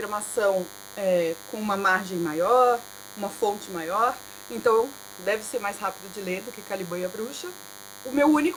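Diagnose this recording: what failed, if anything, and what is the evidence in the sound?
What failed is the analogue side: there's DECT cordless phone buzz riding under the whole recording, start to finish. It's a thin, steady buzz at 100 Hz with a dense stack of harmonics, sitting roughly 20 dB below the wanted sound. A DECT handset or base nearby fires a radio burst every 10 ms, and something in the mic or preamp wiring rectifies it, turning that burst rate into an audible tone.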